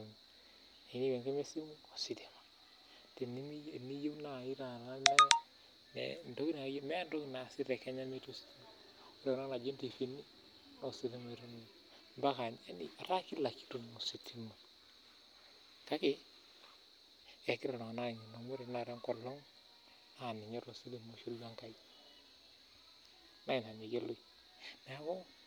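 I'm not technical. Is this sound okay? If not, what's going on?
Yes, this speech recording sounds fine. There is no technical problem to point to at any moment in it.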